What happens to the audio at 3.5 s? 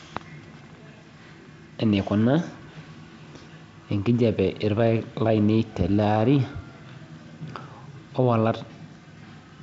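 Between 3.43 and 3.46 s there are bit errors on an ADPCM link. A few flipped bits knock the decoder's step size and predictor off track, so a sharp pop rings into a brief rough burst with a level jump. A lost packet would leave a gap or smoothed fill instead.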